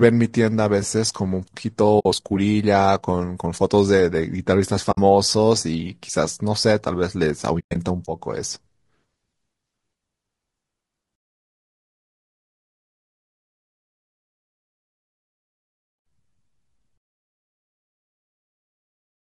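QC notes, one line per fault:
Throughout: low-delay AAC compression. The speech sounds rough and grainy, with noise filling the gaps between harmonics and a thin, synthetic-sounding top band. This is likely AAC-ELD at a rate around 32 kbps, where the low bitrate leaves too few bits to code the voice's spectrum finely.
1.99 to 2.06 s and 4.91 to 4.98 s: AAC frame loss with muting. Each is a 60 ms soft-edged dropout. The lost frames were decoded as silence, and the overlapping windows fade the audio out and back in instead of cutting it.
7.59 to 7.76 s: AAC frame loss with muting. About 140 ms of audio is lost in gaps spread over 160 ms, the longest lasting roughly a tenth of a second. Because the decoder muted the missing frames, the speech breaks up in faded holes.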